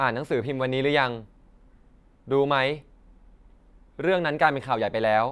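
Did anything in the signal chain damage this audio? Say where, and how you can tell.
No, no signal-chain damage audible.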